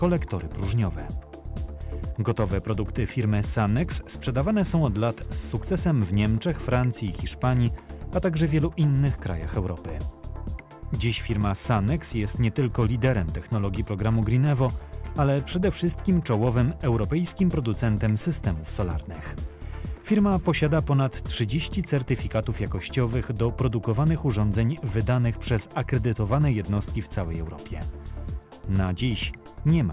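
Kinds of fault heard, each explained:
No kinds of fault are heard in this clip.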